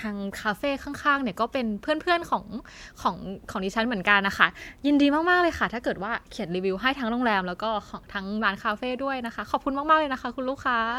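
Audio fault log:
No faults heard.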